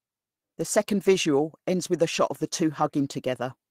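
At 1.01 s, just before "ends with a shot", there's a lost packet rebuilt from error correction. The speech turns rough and grainy for about 0.1 s. That fits three packets dropping out, with the decoder playing the low-bitrate backup copies carried in the following packets, so nothing goes silent. It happens again at 2.77 s, right after "shot of the two", a shorter rough patch of about 0.06 s, likely two packets.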